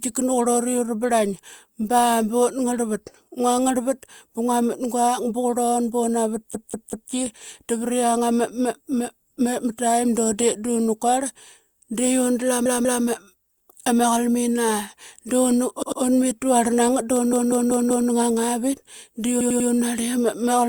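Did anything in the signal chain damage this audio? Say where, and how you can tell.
Yes. Repeated frames at the codec or storage stage: the same compressed frames are decoded more than once. The speech stutters at 6.54–7.12 s (a 192 ms block played three extra times), 12.66–13.04 s (192 ms, twice), 15.82–16.02 s (96 ms, twice), 17.33–18.10 s (192 ms, four times) and 19.41–19.70 s (96 ms, three times). The block lengths fit runs of 32 ms frames. Each repeat replays identical audio and lengthens the clip by about 2.2 s in total.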